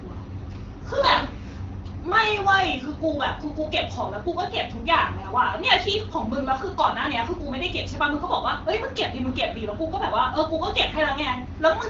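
No technical faults can be heard anywhere in this speech clip. It has passed through an AMR wideband (HD Voice) codec, with the band stopping at about 7.5 kHz and a light coding texture that fits a rate around 12.65 kbit/s.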